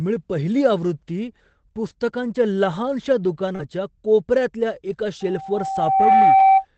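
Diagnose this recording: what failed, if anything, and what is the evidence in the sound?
Short concealed packet loss, 3.55–3.61 s (network/jitter buffer): about 40 ms of audio never arrived, and the decoder extrapolated the preceding sound to fill it, leaving a brief smear.

Lost packet rebuilt from error correction, 3.59–3.61 s and 4.89–5.03 s (network, Opus decoder): the decoder substituted low-bitrate redundant copies, so these 20 ms and 80 ms stretches sound rougher and noisier.

Loudspeaker feedback squeal, 5.20–6.65 s (acoustic playback loop): a 773 Hz tone swells over about a second to roughly 10 dB above the speech, because loop gain exceeded one there.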